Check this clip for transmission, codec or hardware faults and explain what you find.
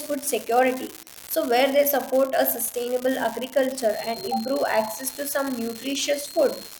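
Two faults are present, one hardware and one acoustic.

A fine, steady crackle runs through the whole clip and carries on through the pauses. This is an unreliable data bit: one data line is marginal, so a random share of samples come out wrong, each as an identical spike of about -17 dBFS.

From 3.86 s to the end, a thin whistle at 4.2 kHz sits well below the speech, swelling and fading slowly in level. This is likely a feedback whistle, with the loudspeaker-to-microphone loop held just at the edge of feedback so one tone sustains without running away.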